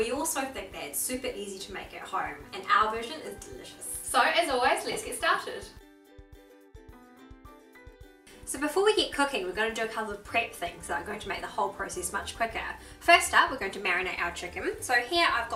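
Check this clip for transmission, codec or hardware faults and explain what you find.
Nothing in this clip points to a fault of any kind. There is no event in the audio that needs explaining.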